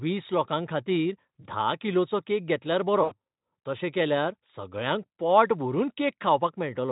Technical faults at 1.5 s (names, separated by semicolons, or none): VoIP packet loss concealed by the speech codec